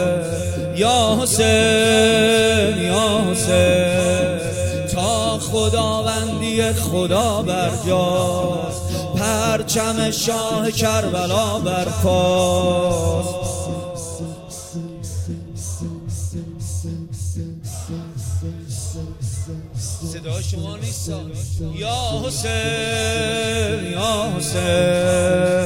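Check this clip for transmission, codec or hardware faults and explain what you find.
One fault appears near the end. Crude rate conversion, 20.53 to 25.65 s: samples were linearly interpolated without filtering, which fits a 48 kHz to 44.1 kHz change, leaving a gritty, inharmonic fizz roughly 30 dB below the sound.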